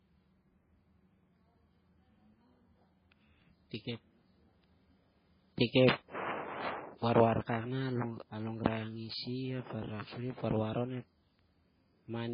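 Speech, with the same fault throughout. Nothing is heard above about 5 kHz, and the sound is smeared, with swirly, watery artefacts of two different kinds layered together. This is likely transcoding between lossy codecs, consistent with a very low-bitrate MP3 re-encoded to Vorbis, which keeps the earlier damage and adds its own.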